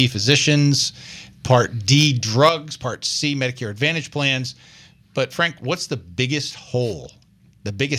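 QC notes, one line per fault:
1.98–2.07 s and 2.43–2.49 s, microphone overload: harsh crackle right after "physicians part" and again shortly after, peaks about 3 dB and 2 dB over, likely an input set too hot.
2.49 s, microphone volume stepped down: everything abruptly drops about 6 dB right after that second distorted peak, likely the call software cutting the mic gain in one step.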